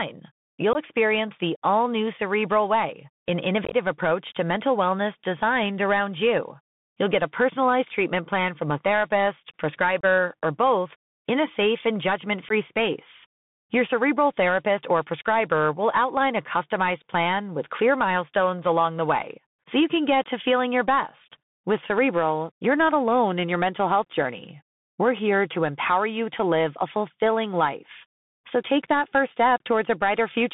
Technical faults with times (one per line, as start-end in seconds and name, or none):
0.00-30.54 Bluetooth CVSD headset codec
0.73-0.77 unconcealed Bluetooth headset packet loss
3.65-3.74 unconcealed Bluetooth headset packet loss
10.01-10.05 unconcealed Bluetooth headset packet loss
12.49-12.52 unconcealed Bluetooth headset packet loss